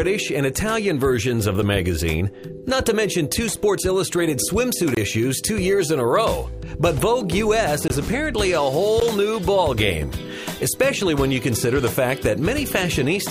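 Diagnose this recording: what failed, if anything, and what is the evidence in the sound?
The failure is likely in the driver or buffer stage: five blocks of digital silence cut into the sound at 1.62 s (about 4 ms), 3.56 s (6 ms), 4.95 to 4.97 s (23 ms), 7.88 to 7.90 s (21 ms) and 9.0 s (15 ms). Each drops abruptly to silence and returns with no fade, so the shortest read as ticks and the longer ones as brief holes. Output blocks likely weren't filled in time; the 6 ms and 23 ms gaps fit 256-sample and 1024-sample buffers.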